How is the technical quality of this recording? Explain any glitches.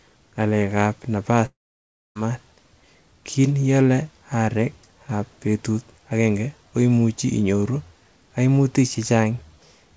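The recording has one clear glitch, a long network dropout. The sound carries the band-limited character of a call codec, with nothing above 8 kHz, which fits G.722 at 64 kbps.

From 1.46 to 2.17 s, just after "ng'alek ab napas", the audio breaks off. About 0.7 s of the signal is lost. The likely cause is that packets stopped arriving. The receiver stretches the last sound into a fading buzz. For about 0.62 s only near-silence remains. The audio then resumes, with the missing part gone for good.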